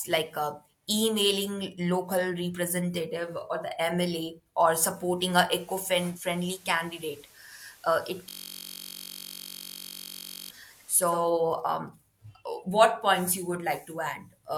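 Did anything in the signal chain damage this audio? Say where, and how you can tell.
Yes, two faults, one at the reception stage and one in the driver or buffer.

At 5.99 s the speech cross-fades over about 0.3 s into a digital radio blending to analogue, here the station's FM signal. The level drops by about 3 dB, and hiss appears roughly 25 dB under the speech. At 11.35 s it blends back. The receiver lost the digital stream and fell back to the analogue broadcast until the digital signal recovered.

From 8.29 s to 10.50 s there is a system hang loop. One 21.33 ms fragment repeats exactly, producing a steady buzz at 46.9 Hz instead of speech. This matches a 1024-sample buffer. The host or driver stalled while the audio hardware kept replaying the same ring-buffer segment, so the output locked onto that block until the system resumed.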